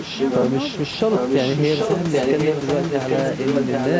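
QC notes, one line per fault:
Throughout, echo leak: a delayed copy of the speech trails the original by 0.78 s at roughly the same loudness. The likely cause is a loudspeaker on one side of the call whose echo canceller let its microphone pickup through, so it was sent back.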